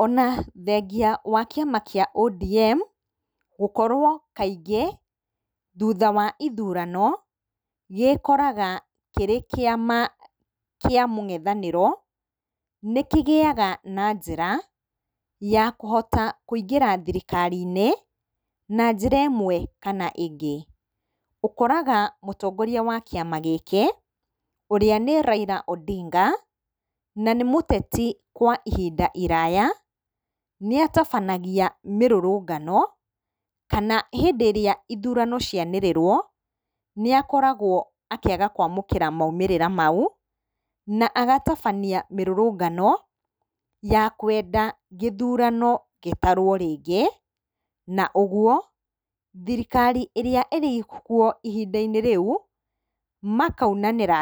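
No technical faults are audible anywhere in the speech recording.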